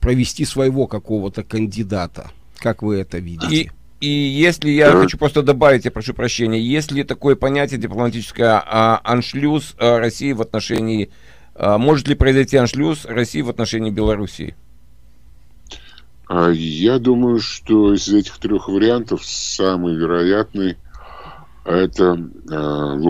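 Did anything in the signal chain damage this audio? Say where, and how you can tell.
Yes, chunks out of order at the buffer stage. At 10.74 to 10.78 s and 14.44 to 14.5 s you get a quick jumbled stutter. A 20 ms block landed late, one slot behind, then two, so nothing's missing but the joins are hard.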